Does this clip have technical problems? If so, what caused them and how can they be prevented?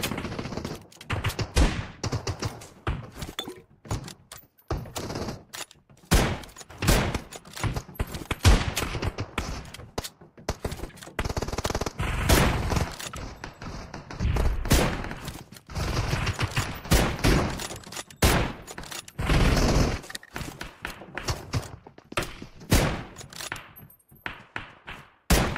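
Yes: corrupt frames were decoded at 9.28 to 9.34 s, 10.88 to 10.94 s, and 21.07 s. Flipped bits in the compressed data were played anyway, so misread gains and codes put energy at the wrong frequencies for a few frames each time. The result is short chirps or noise blips, around -40 and -35 dBFS for the first two and a faint flick near -55 dBFS for the last. A lost packet leaves a gap or smoothed fill, but these events add sound that wasn't there. Checksums with error concealment, or error-protected transport, would keep damaged frames from being played.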